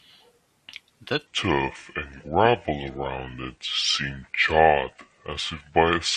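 At 1.27 s a section at the wrong speed begins, likely from playback running on a mismatched clock, and lasts to the end. The speech slows to 0.70 times its recorded rate and drops roughly seven semitones at once, turning deep, heavy and drawn out.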